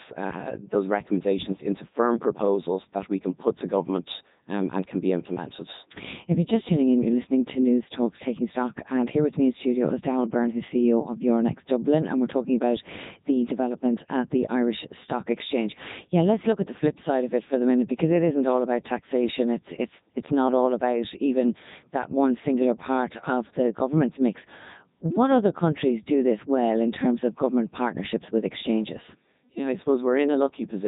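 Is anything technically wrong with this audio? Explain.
Yes. Throughout the speech there is heavy Codec 2 vocoder damage. The decoder rebuilds the voice from sine waves driven by pitch, voicing, energy and a spectral envelope, discarding the original waveform. The result is a robotic, buzzy voice with nothing above 3.8 kHz, consistent with the 3.2 kbit/s mode. Unlike a band-limited or ordinary low-bitrate codec, which smears or warbles real audio, this is resynthesis.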